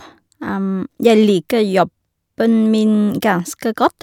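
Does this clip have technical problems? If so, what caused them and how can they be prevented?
No, nothing stood out as a technical problem on listening, so there is no cause to trace or prevention to suggest.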